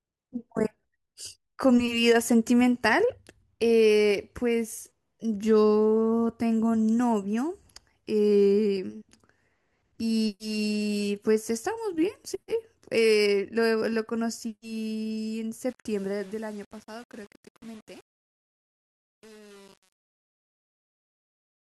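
Truncation distortion on a fade, 15.69 to 21.68 s: the undithered fade-out falls to what sounds like 7-bit steps, so its quiet tail turns gritty.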